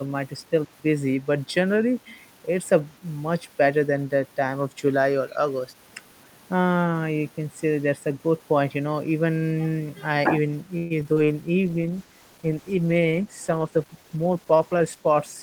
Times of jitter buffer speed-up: 13.69-15.03

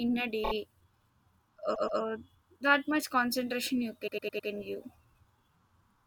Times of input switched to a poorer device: none

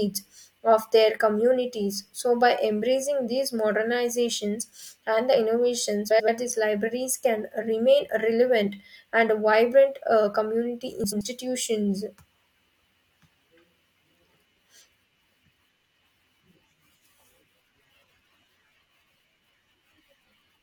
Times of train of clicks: none

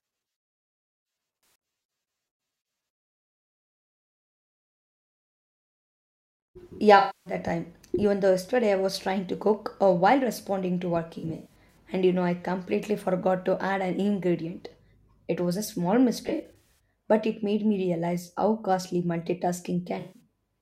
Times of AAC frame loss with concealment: 1.41-1.62, 6.98-7.33, 11.18-11.78, 16.27-16.65, 19.99-20.20

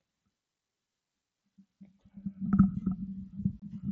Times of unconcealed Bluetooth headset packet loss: 3.60-3.62

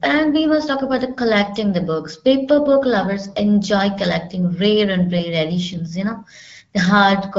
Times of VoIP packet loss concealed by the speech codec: none

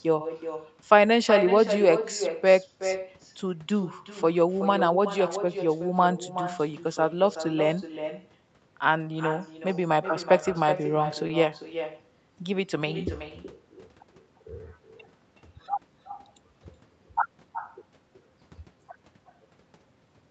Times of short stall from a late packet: 11.27-11.32

